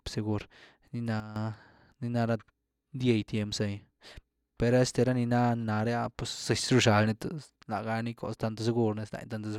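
A digital gain change was likely applied without a ramp, causing a sudden gain jump: speech and background noise drop together by about 11 dB from 1.2 to 1.36 s, then rise by about 6 dB from 6.68 to 7.56 s.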